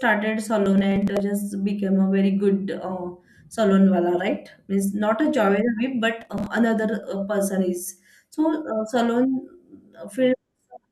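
Speech, marred by processor overload crackle twice: from 0.66 to 1.20 s, just before "just became a very", and from 6.21 to 6.46 s, between "not a job whip" and "another uh person is". Each burst is a gritty tearing from around twenty missed deadlines on buffers of a few milliseconds, each skipped outright. Unlike a single dropout click, the hard-edged gaps come densely in a run and stop once the load eases.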